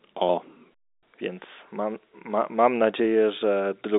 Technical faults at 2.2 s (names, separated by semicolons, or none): none